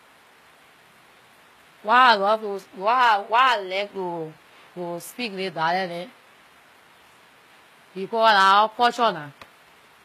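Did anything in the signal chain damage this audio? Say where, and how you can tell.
Yes, in the codec, throughout. Nothing sounds above 14.9 kHz, and the treble is rebuilt from copied lower bands and sounds gritty. This is likely HE-AAC compression, at a bitrate near 20 kbps.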